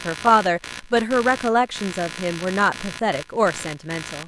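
Speech, with computer activity noise running the whole way through: a buzzy, chirping texture pulsing around 70 times a second, sitting only about 15 dB under the voice. It tracks the machine's load rather than the talking, so the shared audio ground is getting dragged around by processor or graphics activity.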